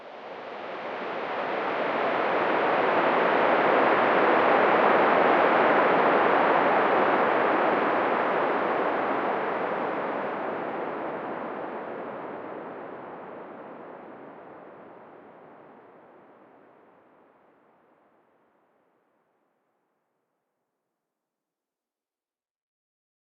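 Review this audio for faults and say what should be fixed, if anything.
Nothing needs fixing; no faults can be heard here.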